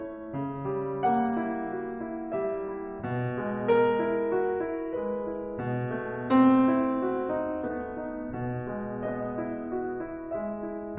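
No faults are audible anywhere in this music clip.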